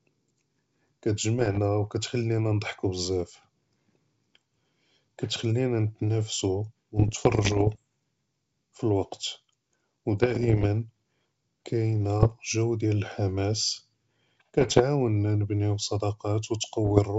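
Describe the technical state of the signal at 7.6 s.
Bit errors on an ADPCM link run from 6.96 to 7.79 s, covering 7.6 s. Flipped bits, somewhere under one percent, derail the G.722 decoder's step size and predictor, so each error rings on for milliseconds, producing pops, rough bursts and brief level jumps in the speech.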